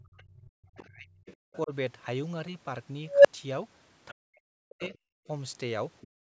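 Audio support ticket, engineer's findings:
Speech suppressed in double talk, 0.00–1.11 s, 1.65–1.72 s, 4.11–4.95 s: the canceller likely misread overlap as echo. The waveform envelope collapses by up to around 40 dB.

Other side's voice leaking through, 0.80–0.85 s, 1.26–1.36 s, 4.71–4.98 s, 6.01–6.08 s: likely residual loudspeaker echo, around 20 dB under the talker. It appears as faint spectrogram streaks.

Background gated by the echo canceller, 6.08 s to the end, after the last leak: the room noise floor drops hard, about 40 dB, and the spectrogram goes nearly blank below the 8 kHz ceiling of the call path.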